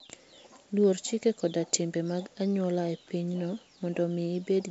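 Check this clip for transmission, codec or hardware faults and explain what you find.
Nothing stood out on listening to this speech, which comes through G.722 wideband telephone coding at 56 kbit/s with its content stopping around 7.7 kHz and only a light trace of that coding.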